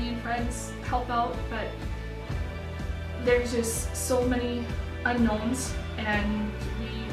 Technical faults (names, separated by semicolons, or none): none